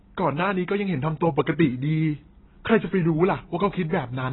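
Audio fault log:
Throughout: AAC compression. The speech is dull and smeared, with nothing above 4 kHz. Sibilants and held vowels have a watery, fizzy warble. The likely cause is heavy AAC-LC coding consistent with about 16 kbps, which removes the top band and coarsely quantises what remains.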